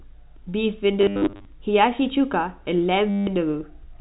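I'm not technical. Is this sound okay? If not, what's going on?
No. There's packet loss with last packet repeated. Around 1.01 to 1.45 s, bits of audio kept going missing, and the phone system filled each gap by replaying the last scrap it had. That gives a choppy, robotic stutter. It happens again from 3.10 to 3.27 s. The scraps look to be about 10 ms long, so longer runs buzz. The muffled, phone-like tone comes from ordinary G.711 telephone coding.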